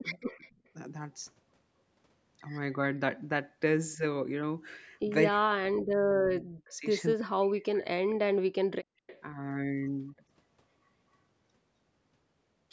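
Speech from a call, with the echo canceller having a rough time of it. The speech suppressed in double talk shows up right at the start, 0.00 to 0.04 s, then as a shallow dip of about 10 dB at 3.96 to 4.03 s, and as two long stretches from 5.29 to 6.86 s and 7.14 to 8.57 s where the voice sinks by about 40 dB or breaks up. That pattern is most likely the canceller hearing the far side talk at the same time, failing to tell this talker apart from its own loudspeaker echo, and pulling everything down together. Then there's echo leak from 0.04 to 0.69 s and again from 9.07 to 9.21 s: a faint copy of the voice trailing by 255 ms, sitting roughly 25 dB under the direct speech. That delay and level suggest a loudspeaker on one end whose canceller didn't scrub out everything its mic picked up, so the residue came back down the line. Just before that second leak, from 8.85 to 9.07 s, the background is gated by the echo canceller: the room tone drops out by about 40 dB for around 200 ms and comes back once the canceller lets go. 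It clamped the mic hard while the loudspeaker was playing. Nothing above 8 kHz gets through, which fits ordinary call microphone processing and isn't a problem in itself.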